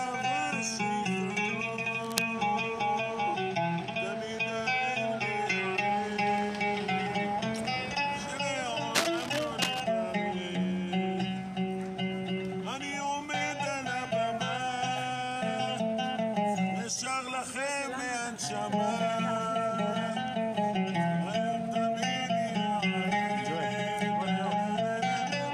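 Bursts of scratchy, crackling rustle sit over the sound from 2.03 to 2.24 s and again, longer, from 8.95 to 9.80 s, roughly 5 dB below the signal. This cable scratch noise likely comes from a worn cable or connector being moved, its contact resistance jumping erratically.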